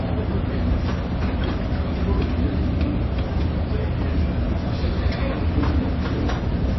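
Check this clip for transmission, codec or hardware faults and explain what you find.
Throughout the clip, MP3 compression at a low bitrate is likely: nothing above 5.8 kHz, and starved bits leave a watery, swirly texture with smeared attacks.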